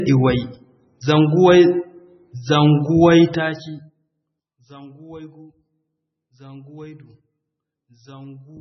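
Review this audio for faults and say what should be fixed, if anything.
Throughout, the speech sounds heavily watery and swirly with nothing above 5.9 kHz, likely MP3 compression at a very low bitrate, which fits about 16 kbps. Encode from the original source at a substantially higher bitrate.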